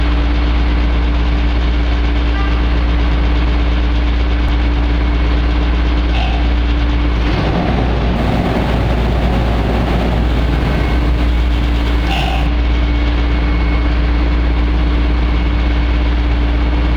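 From 8.16 s to 12.47 s there is crude rate conversion. The sample rate was changed by simply picking the nearest existing sample, with no filtering, and the ratio fits a step from 48 kHz down to 44.1 kHz. Samples are dropped in a repeating pattern. That pattern creates shifted, inharmonic copies of the sound itself. They sit roughly 35 dB below the signal and are heard as a gritty, inharmonic fizz that follows loud and high-pitched moments.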